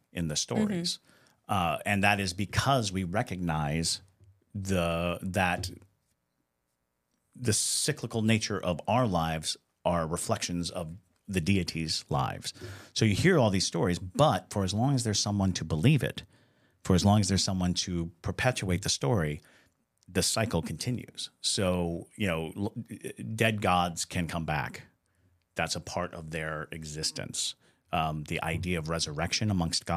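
No technical faults are audible.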